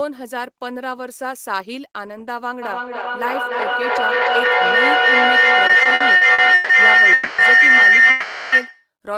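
From 2.62 s to 8.91 s a shrill tone rises over the speech, settling near 2 kHz and peaking about 14 dB above the talker, with a throb repeating roughly every third of a second. This is a feedback howl: a second device in the same room is on the call, so its loudspeaker feeds the microphone and each pass around the loop comes back louder, narrowing onto the frequency the loop favours and pulsing at its round-trip delay.

Within that howl, from 5.67 s to 6.72 s, the speech catches and drags through nine brief hitches, the longest 150 ms, with held sound filling 380 ms, about a third of the span. Nothing is lost, but the flow stutters. These repeated stalls (stutter) arise when packets keep arriving late, the jitter buffer repeatedly empties, and the receiver extends the last sound until the next packet lands.

At 7.13 s to 7.41 s the audio hangs for 250 ms on a stretched continuation of the previous sound, then resumes where it stopped. 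From 8.10 s to 8.55 s a longer hang of 420 ms does the same. Neither leaves a silence or drops any speech, and each pushes what follows later by its own length. Both are call audio freezes, most likely from packets held up in transit until the jitter buffer ran dry.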